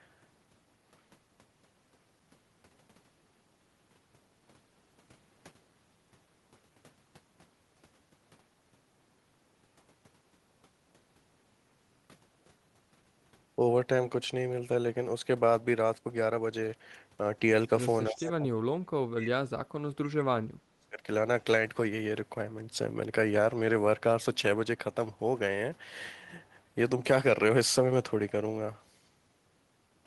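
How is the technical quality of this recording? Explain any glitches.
There's one real glitch here. From 18.1 to 21.07 s the speech is suppressed in double talk: the voice sinks by roughly 35 dB at its deepest for about three seconds. Likely the echo canceller, hearing both ends at once, clamped down on the talker along with the echo.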